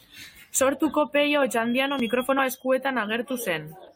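At 2.38 s the speech jumps forward, a case of compressed frames skipped. Encoded frames never reached the output, either missing from the stream or rejected by the decoder as corrupt, so roughly 40 ms of audio vanishes and the talker lurches ahead. That lost time separates it from a dropout filled with silence.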